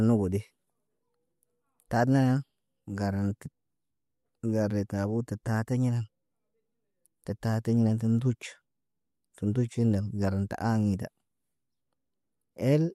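Nothing technical stands out in this speech recording; there's no fault here to point to at any moment.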